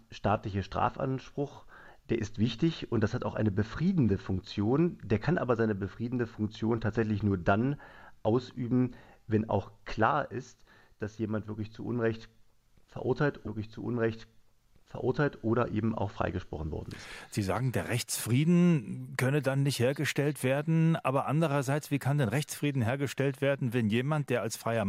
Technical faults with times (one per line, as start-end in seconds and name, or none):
13.46-15.44 stream segment repeated